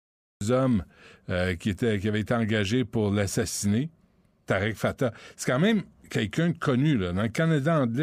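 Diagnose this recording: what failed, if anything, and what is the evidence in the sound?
The clip opens on about 0.41 s of dead digital silence, and at 0.41 s the speech snaps in already in progress, with no attack or fade-in. That is a cut-off start, a failure at the capture or stream-start stage. The recording began after the talker had started, so the first sound in the clip is a fragment caught mid-utterance rather than its true beginning.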